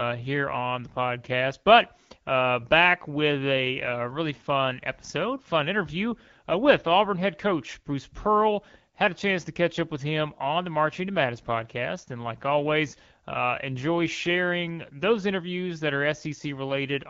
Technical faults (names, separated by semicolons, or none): none